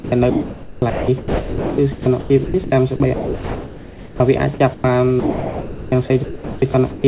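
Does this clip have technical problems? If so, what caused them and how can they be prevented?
Yes. From 0.0 to 4.84 s and again from 5.2 to 7.04 s, the sound is choppy. This is sound chopped by the voice detector. The sender's detector likely switched transmission on and off, replacing 3.12 s and then 1.28 s with comfort noise. To prevent it, lower the detector's sensitivity threshold or turn off discontinuous transmission at the sending end.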